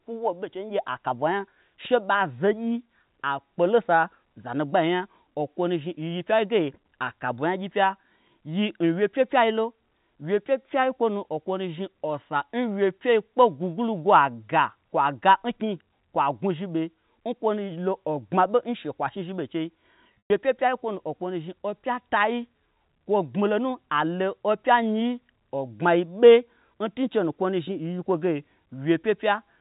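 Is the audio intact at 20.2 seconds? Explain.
No. Packet loss with pitch repetition hits from 20.16 to 20.30 s. About 140 ms drops out, with the longest gap 120 ms. The receiver repeats the last pitch period, so a brief buzzy hold fades to silence, then the sound cross-fades back.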